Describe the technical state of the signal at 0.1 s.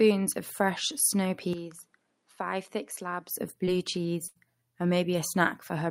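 At 0.1 s the speech signal is intact, with no fault audible at that moment.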